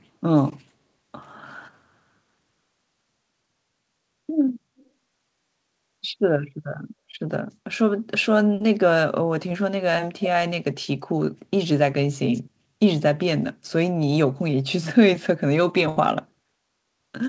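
From 4.77 to 4.86 s a very faint delayed copy of the speech appears, trailing the original by 215 ms and sitting roughly 35 dB below it. This is an echo leak, likely from a loudspeaker at the far end whose echo canceller let a residue through.

Short concealed packet loss occurs twice, at 8.58 to 8.61 s and at 9.49 to 9.51 s. Audio failed to arrive in time, and the receiver extended the preceding sound across about 22 ms and 10 ms respectively before blending back. Each gap is heard as a brief smear or wobble.

At 15.89 to 15.97 s a burst of packet loss removes 70 ms. Concealment stretches the last sound and fades it, giving a short held buzz or dying hiss before the speech resumes with that stretch missing. Throughout, the G.722 path leaves nothing above 8 kHz.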